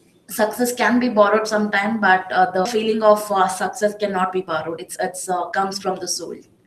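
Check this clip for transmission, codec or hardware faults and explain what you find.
Two transmission faults are present in the speech: a skip ahead followed by a jitter buffer speed-up.

At 2.65 s there is a skip ahead. Roughly a second of speech was discarded, in transit or by an overflowing jitter buffer, while later audio was already queued, and the two sides are spliced with no fill. The speech jumps abruptly mid-flow. Unlike a dropout, there is no silence or concealment noise at the join. The material simply goes missing and the voice lurches forward.

From 2.75 s to the end the jitter buffer is speeding up playback. The buffer held more audio than its target, and the receiver trimmed it by repeatedly removing pitch-period-sized pieces, about 10% faster overall, cutting about 0.4 s in total. The speech sounds hurried but keeps its normal pitch. That distinguishes it from a sample-rate or clock mismatch, which would raise the pitch along with the speed.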